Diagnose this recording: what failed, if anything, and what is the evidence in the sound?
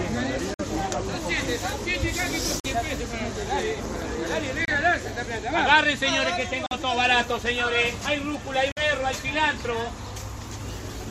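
Hard-edged silent holes of about 30 to 50 ms cut the sound at 0.54, 2.60, 4.65, 6.66 and 8.72 s, every 2 s. This is a gap between stream segments at playback: segment timestamps leave room the player fills with silence.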